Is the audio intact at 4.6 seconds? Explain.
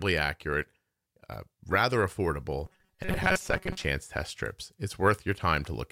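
Yes, the speech at 4.6 seconds plays through cleanly with no audible fault at that moment.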